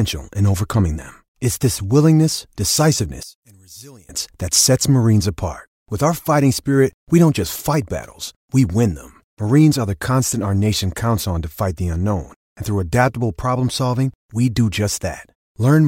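It's a speech recording, and the thing that jumps out is a short stretch from 3.23 to 4.09 s where the voice suddenly drops by about 25 dB to a faint copy before coming straight back. That's likely one channel inverted: with one side's polarity flipped, the centred voice cancels when the channels get summed to mono, so only the small difference between them survives for that span.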